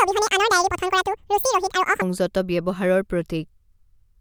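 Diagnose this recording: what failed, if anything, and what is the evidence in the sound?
Section at the wrong speed, likely a playback-stage clock mismatch: from 0.0 to 2.02 s the speech runs twice as fast and sits about ten semitones high, then returns to normal.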